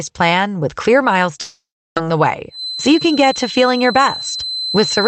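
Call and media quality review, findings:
Long network dropout, 1.41–2.05 s: sound carries on as a fading buzz, then drops to silence, and resumes with roughly half a second missing. Likely cause: a packet gap the receiver concealed by extending the last audio, then shifting playout by about 50 ms.

Feedback whistle, 2.48 s to end: thin steady tone at 4.1 kHz, about 10 dB under the signal, swelling and fading slowly in level. Likely from a loudspeaker-to-microphone loop sitting at the edge of feedback without running away, audible within the 8 kHz Opus band.

Jitter buffer speed-up, 2.87–3.93 s: audio runs at 104% speed with unchanged pitch. The receiver trimmed repeated pitch-period-length slices, around 40 ms in total, to drain excess buffered audio and reduce delay.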